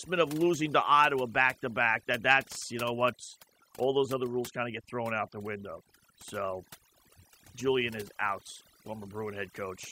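It's a speech recording with overdone noise removal running the whole way through. The noise reducer was pushed too hard, so any frequency band sitting close to its idea of the noise gets pulled way down or dropped out entirely, and the quieter bits of the voice get taken along with it. You end up with a background that drops away and breaks up into little twinkling, warbling specks.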